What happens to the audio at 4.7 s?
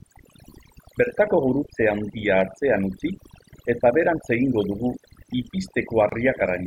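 At 4.7 s the speech is still under the overdone noise removal that runs through the whole clip. The reducer pulls individual frequency bands down hard wherever they sit near its noise estimate, so the background drops and breaks up into twinkling specks and quiet parts of the voice go with it.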